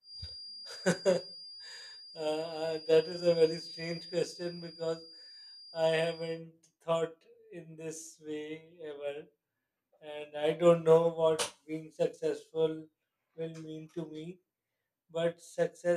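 A loudspeaker-to-microphone loop was likely held just at the edge of feedback from the start until 6.43 s, so a single frequency kept recirculating without building into a howl. The result is a feedback whistle: a thin, steady tone at 4.8 kHz sitting well beneath the speech, roughly 20 dB down, swelling and fading slowly in level. It stops at 6.43 s, just before "thought in this way".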